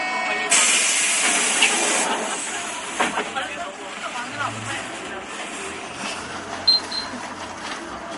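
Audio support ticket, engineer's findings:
Watery, swirly texture across the whole clip. Attacks smeared. Likely cause: MP3 compression, damage fitting a low bitrate near 48 kbps. Encoder short of bits, toggling weak frequency lines between frames.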